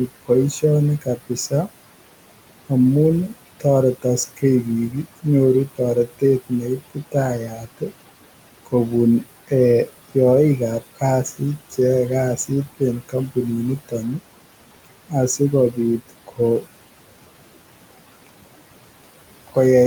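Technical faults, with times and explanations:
Throughout, noise suppressor artifacts: the suppressor pulls steady-noise bands down by about 18 dB frame by frame, so the room noise, about 16 dB under the speech, pumps between words and rises beneath them.
0.07–1.68 s, 3.28–7.92 s, 9.48–10.16 s, 10.8–11.73 s, 12.37–14.21 s, 14.85–16.66 s, speech cut by the noise suppressor: quiet consonants and word endings are mistaken for noise and dropped by about 15 to 18 dB, sounding swallowed. The longest losses, about a second in total, fall in the 3.28–7.92 s stretch.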